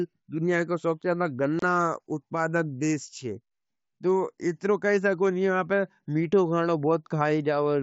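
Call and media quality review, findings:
Unconcealed Bluetooth headset packet loss, 1.59–1.63 s, just after "दुनिया को सबस्यादा": 30 ms hole with hard edges, consistent with roughly four dropped headset-link packets replaced by silence, not concealed. Waveform shows flat gap; spectrogram a full-band vertical blank through the mSBC wideband path.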